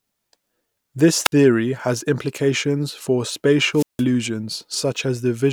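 At 1.24 to 1.32 s, just before "has implications for", a wireless microphone squelch dropout occurs: the FM link fades, hiss rises, and the receiver's squelch mutes the output for 0.06 s. At 3.74 to 4.04 s, after "has implications for", a longer dropout mutes for 0.17 s.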